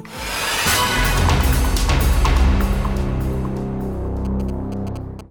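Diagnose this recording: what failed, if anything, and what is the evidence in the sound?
GSM signalling bursts appear from 4.25 to 5.21 s as a galloping dit-dit-dit run of short buzzes at 217 Hz, sitting roughly 20 dB below the main sound. The fault is in the analogue wiring: a nearby 2G phone sending short signalling bursts couples radio energy into a lead or input stage, where a junction rectifies it. The burst envelope then lands in the audio band as that 217 Hz buzz.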